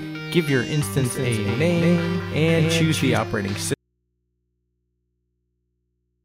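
From 0.97 to 3.17 s a doubled audio track appears: a second full-band copy, about 5 dB quieter, trails roughly 200 ms behind with no decay, likely from an out-of-step edit or a second capture path. On a spectrogram every event repeats as a fainter ghost, and its edges switch on and off abruptly.

At 3.74 s the sound drops out to a faint residue and stays out until the end. Only mains hum remains, around 50 dB below the signal. The waveform collapses to a thin line, and the spectrogram shows steady low horizontal hum bands. The likely cause is a lost upstream feed on a path that stayed live.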